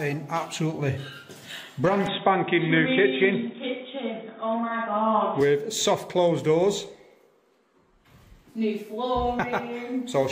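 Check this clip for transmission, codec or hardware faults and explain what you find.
One fault: from 2.06 s to 5.41 s the audio turns dull and boxy, then clears again, with no gap at either switch and little change in level. The likely cause is an input switched to a poorer device, such as a second microphone or a headset call profile, whose narrower band cuts everything above 3.8 kHz and adds its own faint noise floor. A spectrogram shows the upper band abruptly empty across that span, while the waveform envelope stays nearly unchanged.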